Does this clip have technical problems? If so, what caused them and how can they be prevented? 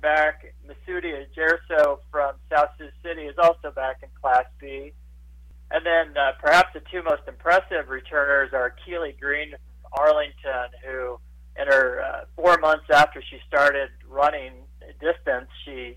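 No, there are no technical problems in this recording.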